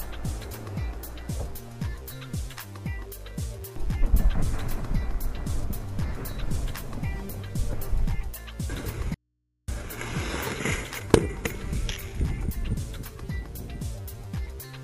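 From 9.14 to 9.68 s, the sound abruptly drops to faint mains hum. This audio dropout to a faint residue is likely the signal breaking while the input stayed live.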